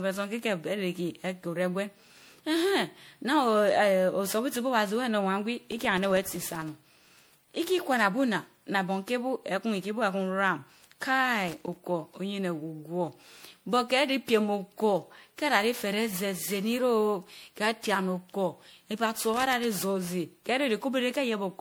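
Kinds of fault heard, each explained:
Generation loss: The speech sounds swirly, hollow and smeared throughout, with consonant onsets blurred and a watery texture beyond what a single moderate-bitrate encode would give. The likely cause is repeated lossy decoding and re-encoding, each pass requantising on a shifted frame grid so that noise and spectral gaps build up. The character fits something like seven rounds of MP3 coding at around 96 kbit/s.
Loose connector crackle: Two irregular bursts of scratchy crackle break into the speech, from 11.48 to 11.77 s and from 19.15 to 19.64 s, the second lasting about half a second. A worn or dirty contact in the signal path is making and breaking rapidly as it shifts, chopping the audio in rough fragments.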